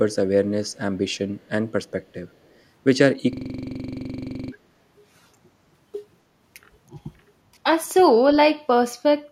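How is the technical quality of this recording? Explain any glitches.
The recording has three distinct glitches: a faint returning echo early on, a stuttering loop in the middle, and a brief dip in level later.

Echo leak: at 0.69 to 0.77 s, 1.12 to 1.18 s and 1.4 to 1.49 s, a very faint copy of the speech returns about 264 ms late, roughly 40 dB below the voice. The likely cause is a far-end echo canceller letting through loudspeaker pickup. On a spectrogram it shows as weak ghost traces trailing the speech.

System hang loop: from 3.33 to 4.52 s, one 42.67 ms slice of audio repeats exactly, producing a machine-gun stutter at 23.4 Hz. That loop length fits a 2048-sample buffer replayed while the system froze, and about a second of real audio is lost. The waveform shows identical repeating blocks, and the spectrogram shows vertical stripes at regular spacing.

Speech suppressed in double talk: at 6.94 to 6.98 s the voice dips by a few decibels for about 40 ms. 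The likely cause is the canceller ducking the talker while the other side spoke. It appears as a brief notch in the waveform envelope and a short fade across the spectrogram.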